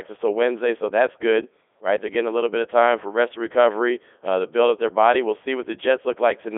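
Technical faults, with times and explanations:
Throughout, Codec 2 vocoder: the speech has that robotic, buzzy quality you get when a decoder rebuilds the voice from sine waves using only pitch, voicing, energy and a rough spectral envelope, so the original waveform never makes it through. The damage is heavy. It's squeezed into a phone-style 300 Hz to 3.5 kHz band, with nothing at all above 3.7 kHz. That fits Codec 2's highest 3.2 kbit/s mode.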